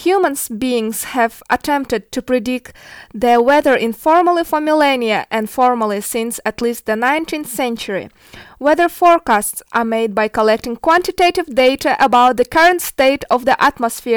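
Speech with hard clipping running all the way through: the level hits the ceiling by about 7 dB, so the loudest peaks get sliced flat, roughly one or two percent of the samples. Those squared-off tops throw harmonics high up, which you hear as crackle on the louder moments.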